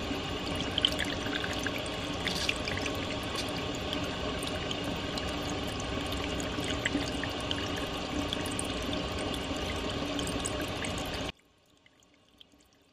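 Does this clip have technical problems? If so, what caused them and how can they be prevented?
Yes. From 11.30 s to the end, one channel inverted is the likely cause: one stereo side's polarity flips, so everything common to both channels cancels in the mono sum. The sound falls by about 30 dB, leaving only a faint remnant. Checking each channel's polarity and monitoring a mono fold-down before release would catch and prevent this.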